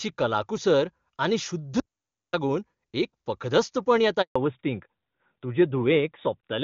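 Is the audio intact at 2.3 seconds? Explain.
No. An audio dropout to silence runs from 1.80 to 2.33 s, so 2.3 s falls just inside it. Right after "कलाकुसर आनी शुद्ध" the speech stops dead for about 0.53 s, and the gap is silent with no room tone beneath it before the speech resumes mid-flow. The likely cause is a brief loss of the input signal while the recording chain kept writing silence, so whatever was spoken in that half-second is gone.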